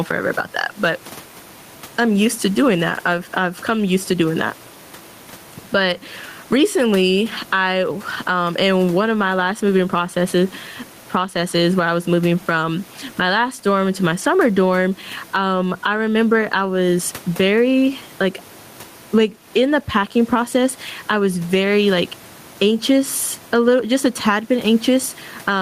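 Right from the start there's gain pumping: with the room noise sitting about 33 dB under the speech, the level swings by around 15 dB, pulling loud and soft parts closer together and squashing the sound. That's likely a mic gain set far too hot, with a fast limiter clamping it down.

At 14.21 s there's a lost packet rebuilt from error correction. One 20 ms chunk went missing, and the decoder filled it from the low-bitrate backup copy carried in the next packet. There's no gap, just a brief rough, noisier blip.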